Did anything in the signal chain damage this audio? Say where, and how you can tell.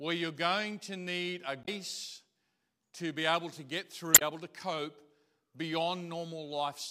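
Yes. Damaged data in the compressed stream, a codec or storage fault, causes two brief glitches at 1.62–1.69 s and 4.12–4.22 s. The decoder misreads the corrupted frames and loses sync until the next header. A spectrogram shows abrupt broadband smears, and the waveform shows sharp discontinuities.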